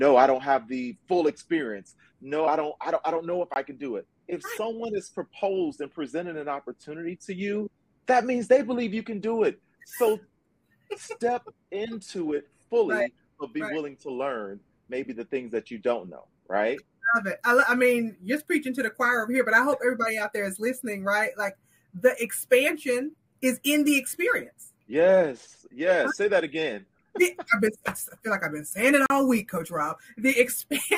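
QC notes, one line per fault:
3.54–3.56 s and 29.06–29.10 s: block of digital silence. The audio drops to silence for 20 ms, then 40 ms, and returns with no fade. The hard edges distinguish it from a fade-out or level dip, and the absence of any repeated material distinguishes it from a stutter. The longer second gap is heard as a brief hole rather than a single tick.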